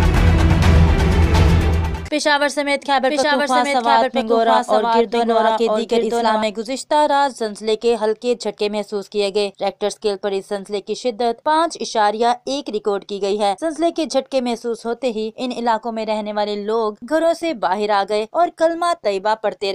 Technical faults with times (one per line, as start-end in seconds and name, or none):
3.09-6.43 doubled audio track